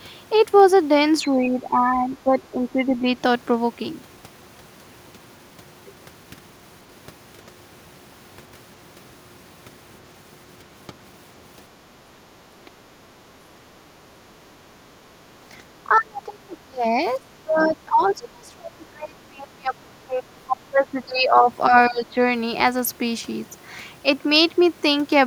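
A low buzz at 46.9 Hz runs throughout, with the speech keeping its normal speed and pitch: a block size mismatch (truncated), where block ends are discarded, which fits 1024-sample blocks.

The speech dips, thins or drops out in pieces at 1.28–3.05 s (about 10 dB down), 15.84–16.85 s (about 30 dB), 17.17–20.87 s (about 25 dB), 21.04–21.36 s, 21.69–21.73 s and 21.89–22.18 s. This is likely speech suppressed in double talk, with an echo canceller turning the talker down while the other side spoke.

At 17.58–17.7 s a brief, faint second voice, about 20 dB below the speech, is likely the other side's voice leaking through from the loudspeaker.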